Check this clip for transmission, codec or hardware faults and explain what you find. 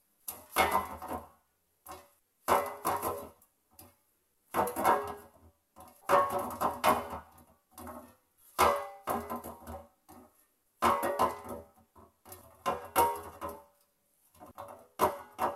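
No transmission, codec or hardware faults can be heard anywhere in the recording. There is nothing to report beyond the sounds themselves.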